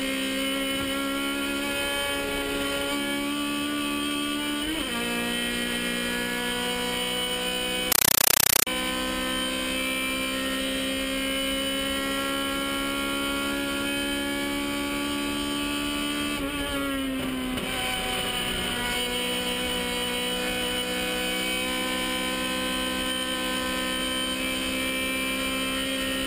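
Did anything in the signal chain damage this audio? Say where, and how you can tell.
Yes. From 7.92 to 8.67 s the sound is replaced by chattering static, a case of a compressed stream played as audio. The fault sits at playback, on the digital link, where encoded data was passed through as ordinary samples instead of being decoded. What sets it apart from random digital noise or corruption is its regularity: 8 ms bursts of noise, each followed by silent padding, repeating at 31.25 Hz. That rhythm fits a 384 kbps AC-3 stream.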